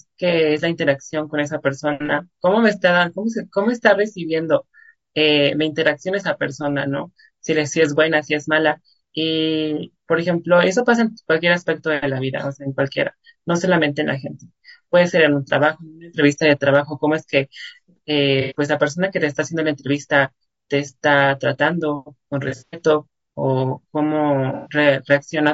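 Low-delay AAC compression runs through the whole speech clip. The voice is rough and grainy, with noise filling the gaps between harmonics and a thin, synthetic top band. This is likely AAC-ELD's short frames starved of bits, at a rate that fits about 32 kbps.

AAC frame loss with concealment occurs at 2.06–2.11 s (30 ms, fitting one lost frame), 18.41–18.55 s (90 ms), 22.49–22.81 s (180 ms scattered, the longest run about a tenth of a second) and 24.53–24.73 s (120 ms). In each, the decoder rebuilds missing audio from the last good spectrum, leaving a smeared, phasey patch.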